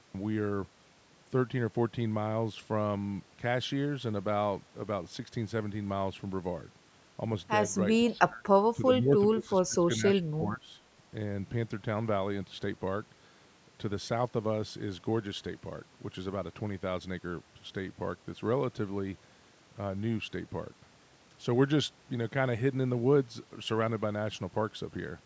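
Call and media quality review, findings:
Speech suppressed in double talk: dips of roughly 10 to 25 dB at 8.08, 8.73, 8.99, 9.3 to 10.79 and 10.97 s. Waveform shows a gouged envelope, and the spectrogram shows faded bands. Likely cause: the echo canceller ducking the near-end talker along with the far-end echo.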